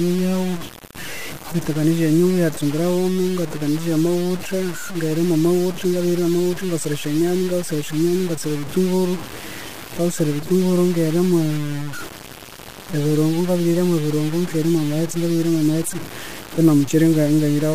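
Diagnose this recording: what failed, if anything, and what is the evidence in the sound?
Grainy distortion that tracks the speech throughout, with quiet tails sputtering into silence, points to likely low bit depth without dither at sample-format conversion: roughly five-bit truncation. Steady hiss would stay constant instead.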